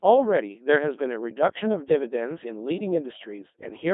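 It's a short speech recording run through a Codec 2 vocoder the whole way, and it sounds it: robotic and buzzy, with the voice rebuilt from sine waves rather than the original waveform. Only pitch, voicing, energy and a rough spectral envelope survive, and the damage is heavy, which fits a very low rate around 2.4 kbit/s. The band is squeezed to roughly 200 Hz to 3.6 kHz, so there's no low end and no air.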